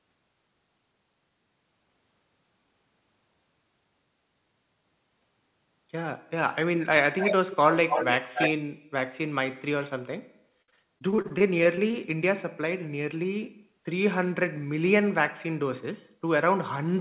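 From 7.18 to 8.18 s, and again briefly at 8.34 to 8.51 s, there's an echo leak: a copy of the speech trailing about 275 ms behind, a bit quieter than the speech at first, then about as loud. The likely cause is a far-end speakerphone whose echo canceller let its pickup slip back.

Then from 10.62 to 11.95 s comes repeated packet loss with that robotic, choppy quality. A dozen or so holes, the longest 60 ms, get patched by stretching the last sound, so roughly a fifth of that stretch is filler and some pieces are simply gone. All of it sits in a band with nothing above 4 kHz, which fits a G.711 A-law call path.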